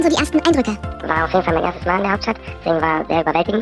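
From start to finish the clip runs at the wrong sample rate. Everything plays 1.5 times too fast and about 7 semitones high, with speed and pitch shifted together, which fits 16 kHz material played back at 24 kHz without any rate conversion.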